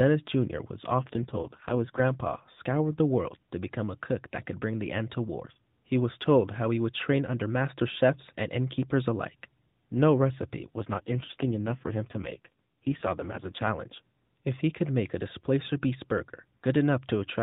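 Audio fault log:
1.00–2.01 s and 10.76–13.69 s, AMR rate drop: the narrowband mobile codec falls back to a leaner mode, and the roughness fits a step down from 12.2 kbps to 4.75 kbps. With fewer bits to model each 20 ms frame, the speech turns buzzy and synthetic, then clears when the rate recovers. On a spectrogram the 4 kHz ceiling holds and the waveform shows no gap, but harmonic lines blur and upper formants smear into coarse blocks in both spans.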